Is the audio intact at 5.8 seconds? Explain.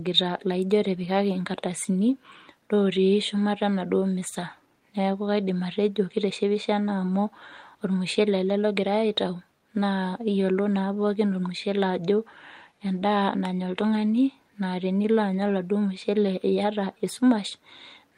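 No. At 5.8 seconds the speech falls within repeated timing corrections running from 0.21 to 18.12 s. The receiver keeps trimming short pieces, playing at 104% speed, heard as slight hiccups and an unsteady tempo. This comes from clock drift between sender and receiver. The sender's clock runs roughly 4 percent fast, so the buffer keeps overfilling.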